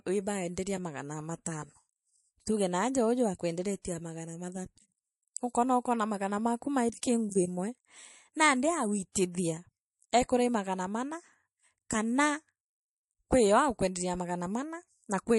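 Throughout the speech there is a plainly audible watery, swirly texture, likely MP3 compression at a low bitrate, consistent with around 48 kbps. Pre-echo comes at 3.82 s, between "tuuge naaja uuju" and "na magana", and again at 9.12 s and 9.32 s: a short hiss of 25 to 32 ms, about 14 to 26 dB up, precedes each attack and softens it, because quantisation noise spreads across long transform blocks with no switch to short ones.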